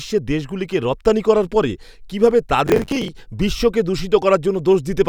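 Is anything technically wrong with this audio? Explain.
Yes. Processor overload crackle runs from 2.67 to 3.08 s. The processor fell behind and missed about twenty buffer deadlines over that stretch, each around 10 ms. Stale audio replayed in their place, and these hard-edged repeats make a gritty crackle over the speech.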